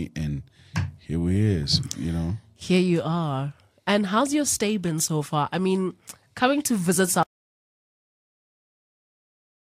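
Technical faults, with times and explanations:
7.23 s to the end, audio dropout to silence: right after "mean coming to visit" the speech cuts off abruptly into silence, with no room tone or decay. This sets it apart from a natural pause or fade. The input was likely lost while recording continued.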